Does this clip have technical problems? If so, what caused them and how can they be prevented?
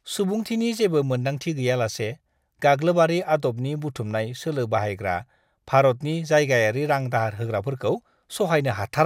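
No, the speech signal shows no audible technical problems, so there is nothing here that needs preventing.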